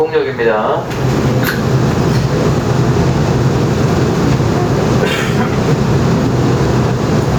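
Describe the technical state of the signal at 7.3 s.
Gain pumping runs throughout, including 7.3 s: likely an overdriven input with a fast limiter, so the gain swells and ducks by about 15 dB, unlike gating, which cuts to silence.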